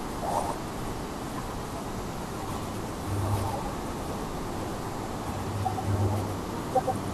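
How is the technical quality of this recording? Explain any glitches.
The recording has a single fault that lasts from start to finish.

Doubled audio track, throughout: a second, slower capture path likely mixes in a dry copy about a tenth of a second late and about 5 dB down, producing a crisp slapback.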